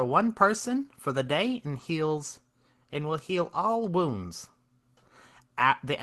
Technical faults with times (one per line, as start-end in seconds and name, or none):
1.79 lost packet rebuilt from error correction